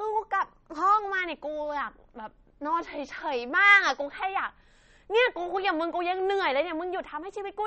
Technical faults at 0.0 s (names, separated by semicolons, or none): MP3 compression